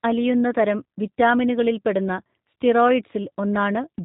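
Throughout, G.729 codec damage is plainly audible: speech rebuilt from a tract filter and sparse pulses sounds rough and synthetic, consistent with 8 kbit/s, with the spectrogram empty above 4 kHz.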